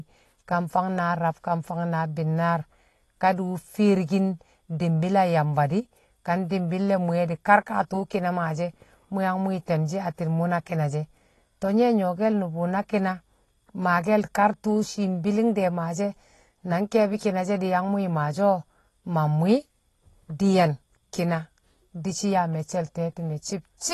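From start to finish the speech sounds dull and smeared, with nothing above 12 kHz and a plainly audible watery, fizzing texture on sibilants and held vowels. The likely cause is AAC compression, with AAC-LC at a low rate, which fits about 32 kbps. With so few bits per frame, the encoder lowers its cut-off, drops or roughly fills weaker bands, and leaves the quantisation warble that smears the speech.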